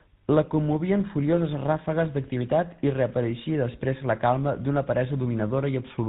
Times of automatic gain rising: none

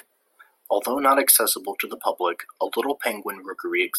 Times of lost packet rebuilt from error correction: none

